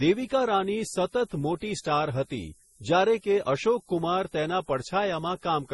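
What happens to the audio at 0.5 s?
Low bit depth with noise shaping runs through 0.5 s and the whole clip. The speech is quantised coarsely, which fits 8-bit samples, and the rounding error is pushed upward in frequency, leaving a steady, thin hiss roughly 25 dB below the signal that grows toward the top.

Transcoding between lossy codecs is also present at 0.5 s, as everywhere in the clip. Nothing is heard above 11.5 kHz, and two layers of coding artefacts mix together, likely from Opus at 32 kbit/s re-encoded as MP3 at 32 kbit/s, with the second codec wasting bits on the first one's damage.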